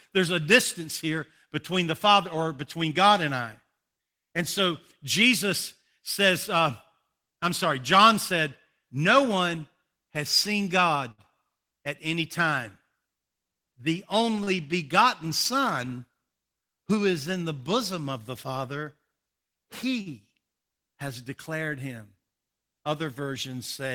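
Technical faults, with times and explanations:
11.11–11.36 s, 14.43–14.50 s and 20.01–20.09 s: short stall from a late packet. Each time a packet arrived late, the jitter buffer emptied and the receiver stretched the last sound to fill the gap, about 67 ms before "at any time", then 35 ms and 46 ms. Nothing is lost, but a sound hangs too long with a faint buzz or dip. On a spectrogram the harmonics run flat and unchanging, and the waveform shows near-identical repeated cycles.
16.64–16.98 s: jitter buffer speed-up. The buffer had built up more audio than it targets, so the receiver cut short pitch-period pieces, roughly 40 ms in total, just before "is in the bosom". The speech runs at about 109% speed at unchanged pitch and sounds briefly hurried. On a spectrogram the harmonic spacing stays the same while the syllables are squeezed in time, and the waveform shows tiny splices between cycles.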